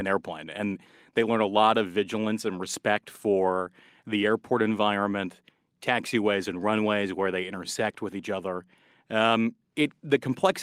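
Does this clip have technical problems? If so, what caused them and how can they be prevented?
No, this clip has no technical problems, so there is nothing to trace back or prevent.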